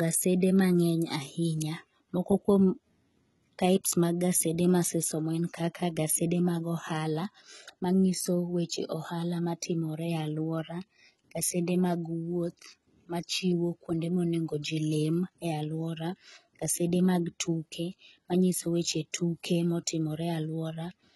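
Throughout the speech, the top end sounds bright but false: s sounds come out gritty and lispy, with a metallic sheen, and nothing reaches above about 11.8 kHz. This is heavy HE-AAC compression damage, likely from a low bitrate around 16 kbps. At that rate the encoder codes only the lower band and rebuilds the treble by copying lower bands upward under a coarse envelope, so the harmonics in the treble no longer line up with those below.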